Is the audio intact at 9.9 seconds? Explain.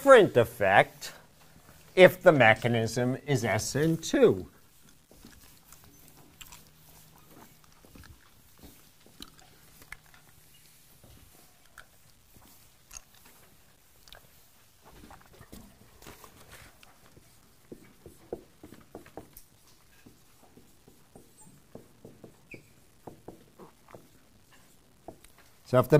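No. At 9.9 seconds, as throughout the clip, quiet passages turn grainy, with distortion sitting about 40 dB below the signal. The likely cause is low bit depth without dither: samples truncated to what sounds like about 10 bits, so the rounding error follows the signal.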